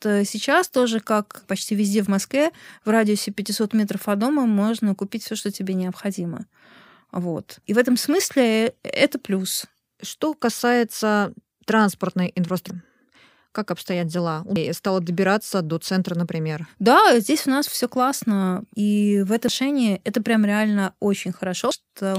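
Damaged data in the compressed stream causes brief blips at 12.70 s after "касается транспортной", 14.56 s after "как обстоят дела", 19.48 s and 21.71 s. Each time, the decoder misreads corrupted frames and loses sync.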